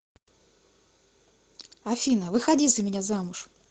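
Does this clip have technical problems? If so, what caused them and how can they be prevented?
Yes. From 2.03 s to the end, there is a call bitrate drop. The call's bandwidth estimate fell and the Opus encoder was forced onto far fewer bits, which fits a fall from 32 to 16 kbps, with the lowest rate held for about 1.24 s. The speech is then coded more coarsely and sounds rougher. To prevent this, give the call steadier network headroom and set a higher minimum bitrate so the encoder isn't starved when the estimate dips.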